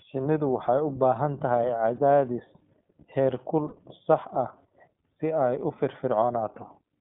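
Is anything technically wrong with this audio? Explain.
Yes. The whole clip has gone through the iLBC codec. The speech is confined to roughly 150 Hz to 3.5 kHz, with nothing above 4 kHz. Each 20 ms frame's excitation is coded independently, which fits the 15.2 kbps mode and leaves a plainly audible rough, synthetic edge on the speech.

There are lost iLBC frames at 1.96 s (about 20 ms, consistent with one missing frame) and at 3.68 to 3.74 s (about 40 ms, pointing to two frames). In each gap the decoder repeats the last pitch cycle blended with noise, heard as a brief held, buzzy vowel. Normal speech returns at once because frames stand alone.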